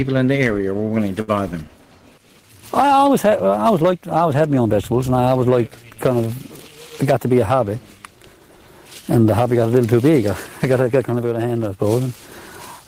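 At 1.21 s a burst of packet loss begins and lasts until 1.31 s. The receiver holds the last sound for about 61 ms and fades it out. About 60 ms of audio is then simply gone. Playback resumes further on, with a small jump.

At 11.05 s a sudden gain jump drops the level by about 5 dB. Sound and background noise fall together, with no ramp. This is likely an untapered digital gain change. The level recovers at 11.80 s.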